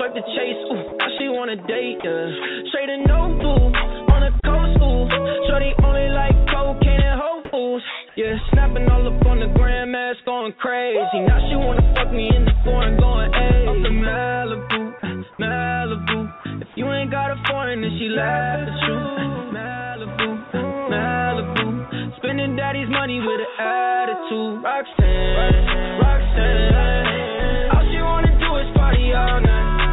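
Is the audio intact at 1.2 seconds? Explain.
No. From 1.18 to 1.2 s, a 20 ms stretch of the sound gives way to a brief patch of steady, featureless noise before the signal returns. This is most likely sound dropped by the voice detector: the sender judged that instant to be background, stopped transmitting, and the receiver filled the gap with comfort noise. On a waveform it appears as a short flat, low-level band; on a spectrogram, a thin uniform smear interrupting the structured energy below the 4 kHz ceiling of the call codec.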